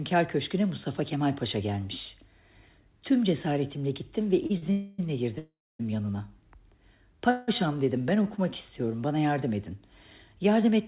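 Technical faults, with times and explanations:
4.46 to 4.51 s and 4.57 to 4.64 s, short stall from a late packet: the last sound is held for 31 ms and then 42 ms while the jitter buffer waits, then resumes unbroken. On a spectrogram the frequency bands flatten into short horizontal smears, with a slight dip in the waveform envelope.
4.72 to 5.00 s, 5.38 to 5.81 s, 7.30 to 7.50 s, call audio freeze: the sound turns into a fading buzz for 267 ms, 410 ms and 173 ms, likely because delayed packets emptied the jitter buffer. The second one drops to silence for 260 ms, a flat waveform line, before playback resumes from where it stopped.
10.87 s, loudspeaker feedback squeal: a 1.1 kHz tone, building over about a second, sits around 5 dB above the sound just as the clip ends. It comes from the microphone hearing its own loudspeaker, so gain exceeds one at that frequency. On a spectrogram it shows as a single bright horizontal line, and the waveform swells into a steady sine-like oscillation.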